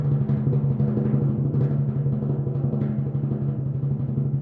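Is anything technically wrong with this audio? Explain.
No, nothing technically wrong can be heard in this music clip.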